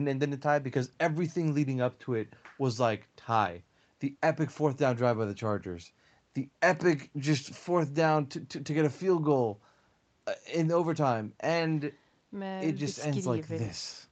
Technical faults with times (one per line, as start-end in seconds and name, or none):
none